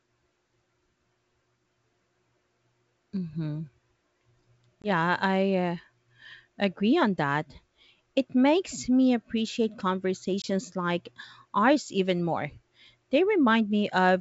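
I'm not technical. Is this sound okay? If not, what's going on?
No. The speech drops out twice, at about 4.82 s and again at 10.42 s, just before "like ours even more". Each gap is a sudden hole about 20 ms long, followed by a brief click or roughness as the speech returns. This is packet loss on an ADPCM call: a single small packet went missing, and the decoder, which predicts each sound from the last, briefly lost step with the sender before recovering. The G.722 wideband coding itself sounds clean.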